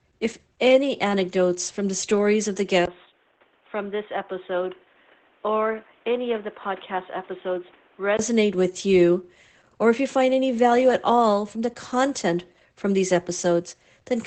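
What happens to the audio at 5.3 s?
At 5.3 s the speech sits inside a stretch from 2.85 s to 8.19 s where it turns dull and boxy. Nothing is heard above about 3.8 kHz. The level drops by roughly 5 dB. A new background noise appears, around 30 dB under the speech. A short gap, about 20 ms long, marks the change at 2.85 s. The cause is likely an input switched to a poorer device, such as a headset's call profile, with its own narrow band, tone and noise floor. The wider band returns at 8.19 s.

The whole clip, this moment included, also carries Opus voice compression. Above about 8.5 kHz the sound is empty. So the SILK linear-prediction coder is working in wideband here. The excitation is coded coarsely, which leaves the speech slightly hoarse and robotic. The damage is plainly audible and fits a low bitrate around 12 kbps in 20 ms frames. During the switched span, the device's narrower band sits on top of this coding damage.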